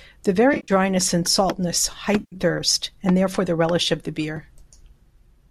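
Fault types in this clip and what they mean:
AAC frame loss with concealment: chunks of the stream went missing and the decoder papered over them from the last good spectrum, giving smeared, noisy patches at 0.54–0.72 s just before "and saltness" and at 2.20–2.36 s, right before "thirst and therefore the."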